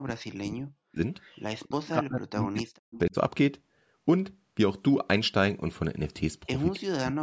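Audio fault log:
0.0–1.0 s, 1.66–3.15 s and 6.77 s to the end: speech suppressed in double talk. The voice sinks by as much as about 40 dB. This is likely an echo canceller that could not tell the near talker from loudspeaker echo while both sides spoke, so it attenuated everything. On a waveform the envelope collapses abruptly; a spectrogram shows the harmonics and upper bands vanishing in patchy blocks.
1.21–1.41 s, 2.94–2.99 s and 6.74–6.79 s: echo leak. Faint scraps of a delayed copy of the voice, lagging by 273 ms, sit about 30 dB below the speech in the first burst and about 20 dB below in the two brief later ones. The likely cause is a loudspeaker-side echo canceller letting residual pickup slip back. A spectrogram shows weak repeats of earlier harmonic patterns offset in time, with little visible in the waveform.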